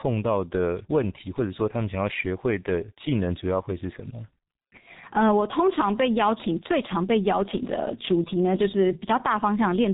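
From start to finish the speech carries heavy G.723.1 codec damage: nothing above 3.8 kHz, slow-updating frames, so it's muffled and hoarse with smeared consonants, consistent with the 6.3 kbit/s mode.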